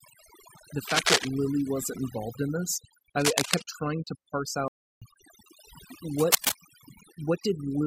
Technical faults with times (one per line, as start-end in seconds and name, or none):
0.00-7.87 overdone noise removal
0.83-1.27 cable scratch noise
3.17-3.65 cable scratch noise
4.68-5.02 playback stall
6.19-6.52 cable scratch noise